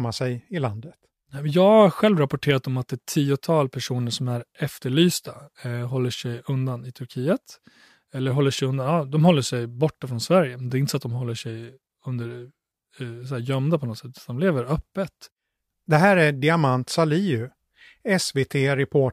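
Nothing in the speech here gives away a technical fault, so there's no moment to point to and nothing to explain.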